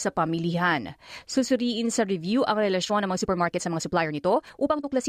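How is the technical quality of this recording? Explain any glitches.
One glitch stands out: a time-stretched section from 2.81 s to the end, starting right after "sa review ang". Software likely squeezed this stretch to fit a shorter length, dropping short pieces to keep the pitch. Playing about 1.4 times faster, the pace jumps abruptly and the speech turns rushed while its pitch stays the same.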